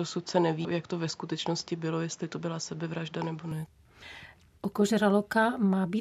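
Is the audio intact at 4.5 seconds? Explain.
Yes, at 4.5 seconds the speech plays through intact, with no dropout, click, distortion or other fault.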